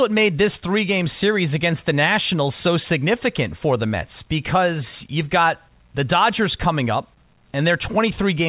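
Nothing stood out on listening to this speech recording.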